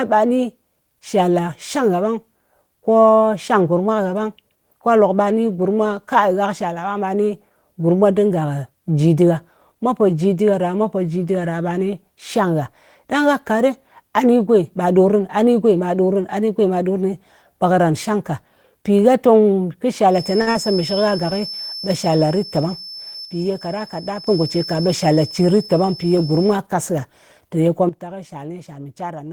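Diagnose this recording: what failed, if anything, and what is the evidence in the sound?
A thin, steady whistle at 5.3 kHz sits well below the speech from 20.07 to 26.61 s, swelling and fading slowly in level. In the acoustic path, the loudspeaker-to-microphone loop is likely hovering at the edge of feedback, sustaining one frequency without running away.

At 20.41 to 20.49 s the sound is held unnaturally long for 54 ms, then resumes where it left off. This is a short stall from a late packet: the network delivered it late, the jitter buffer emptied, and the receiver stretched the last sound until it arrived.

Just after, from 20.51 to 20.57 s, about 40 ms of audio is missing and replaced by a brief smear. This is short concealed packet loss: the network lost that audio, so the receiver extended the preceding sound, then blended back into real signal.

Speech and background noise drop together abruptly, by about 8 dB from 23.25 to 24.27 s and by about 12 dB from 27.89 s to the end. 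These are sudden gain jumps, likely from a digital gain change applied without a ramp in call processing.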